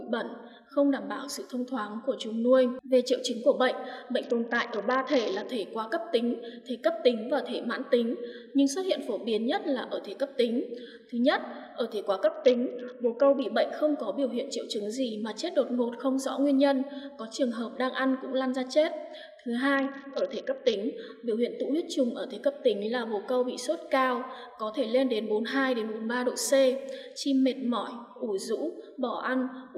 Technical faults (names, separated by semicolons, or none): Bluetooth SBC bit pool drop